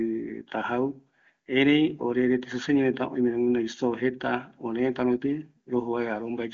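No faults are audible in this speech; the band stops at about 7.2 kHz, as expected of the AMR wideband (HD Voice) codec, and the clarity fits its top rate of 23.85 kbit/s.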